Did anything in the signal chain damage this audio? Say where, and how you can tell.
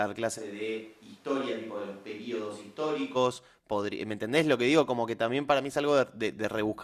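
Yes. A switch to a distant microphone runs from 0.39 s to 3.15 s: the speech abruptly turns roomy and hollow, thinner in the bass, about 5 dB quieter, with room noise rising to roughly 30 dB below the speech. Likely cause: a close-mic dropout at the capture stage, leaving only a farther pickup.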